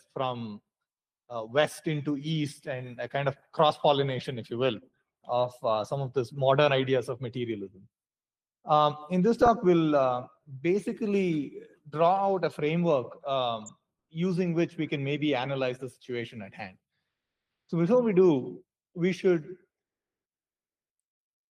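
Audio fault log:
9.42–9.48 s and 13.62–13.70 s, DAB burbling: two short bursts of burbling sit over the programme. Each lasts under a tenth of a second. Weak reception let bit errors slip past the error correction into the MP2 data. Corrupted samples put short blips of noise into single sub-bands. The sound points to eight and nine damaged frames, with an error rate of a few tenths of a percent.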